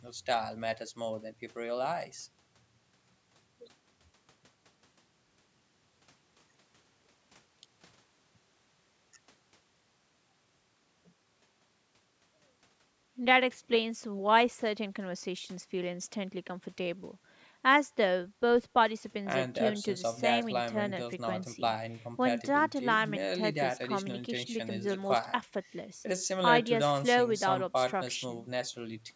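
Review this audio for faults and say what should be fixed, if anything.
Nothing in this speech recording needs fixing, as no faults can be heard. It has passed through a call's microphone processing, which trims away the lowest bass and leaves nothing above 8 kHz, and that is how such a path normally sounds.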